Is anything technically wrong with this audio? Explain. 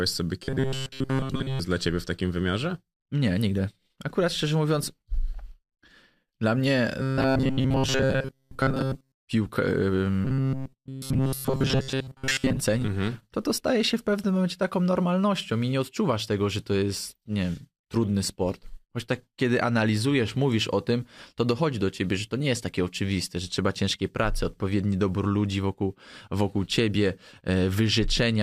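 Yes. Robotic sound from repeated short buffers appears at 0.44–1.60 s, 7.01–9.23 s and 10.25–12.60 s. The likely cause is audio arriving too seldom, with playback filling the gaps by looping a short stretch of about 7.5 ms for most of each span while the real speech is skipped. That loop imposes a fixed 133 Hz buzz, so the speech turns rigid and metallic while loosely tracking the words.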